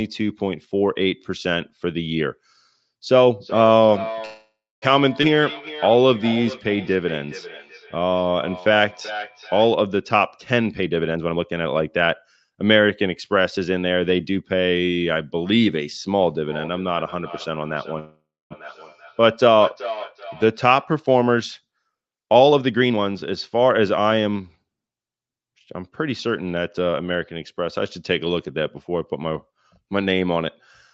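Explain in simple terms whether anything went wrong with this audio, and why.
Several things went wrong in this call recording.

Feedback echo between two devices: Two devices in the same room seem to have been on the call together, so one played the other's sound aloud and that microphone picked it up again. Neither device's echo canceller could remove sound coming from the other device. From 3.4 to 9.7 s and again from 16.5 to 20.9 s, the speech returns about every four tenths of a second as a thinner, ringing repeat underneath the original.

Call audio freeze: The likely cause is packets being held up in the network, so the receiver briefly ran out of audio. From 4.25 to 4.84 s the last sound is stretched into a fading buzz or hiss that drops to about a quarter second of silence. The same happens from 17.99 to 18.52 s, with about the same amount of silence. The speech then continues from where it stopped, so nothing is lost, but a pause of roughly half a second has been inserted.

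Skip ahead: At 5.22 to 5.25 s about a fifth of a second of speech was dropped, and playback jumped to newer audio. The two sides are joined almost directly, so a bit of speech is simply missing.

Jitter buffer slow-down: Right after that, from 5.36 to 7.27 s, the receiver needed to rebuild its reserve of audio. It repeated tiny slices of the speech, adding about 0.15 s in total. The speech plays at about 93 percent of normal speed without changing pitch, so sounds come out slightly drawn out.

Jitter buffer speed-up: Later the receiver was holding too much audio and trimmed it by cutting out tiny slices, roughly half a second in total each time. From 10.52 to 14.12 s the speech runs about 16 percent fast, and from 22.19 to 24.65 s about 21 percent fast. The pitch stays the same, but the talking sounds hurried.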